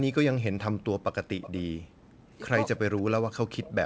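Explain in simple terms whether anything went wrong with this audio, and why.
Three kinds of fault can be heard in this speech.

The voice sinks almost to silence from 0.0 to 0.16 s, 0.35 to 0.63 s, and 2.77 s to the end. This is most likely speech suppressed in double talk. Both sides spoke at once, and the echo canceller muted everything to be safe.

Background gated by the echo canceller shows up from 0.86 to 1.07 s and from 1.67 to 2.35 s. The room sound nearly vanishes while the other side's audio plays through the loudspeaker. Then it comes back.

From 1.41 to 1.62 s, a faint second copy of the voice trails the original by about a third of a second. This is an echo leak. It likely happened because the echo canceller missed some of the loudspeaker sound, which was then sent back.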